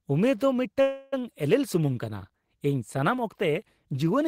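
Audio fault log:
0.81–1.22 s, call audio freeze: the speech stalls into a fading buzz held from the last sound, likely from delayed packets draining the jitter buffer. About 310 ms is filled, nothing is lost, and later speech runs that much late. The spectrogram shows smeared, decaying horizontal bands, not a blank gap.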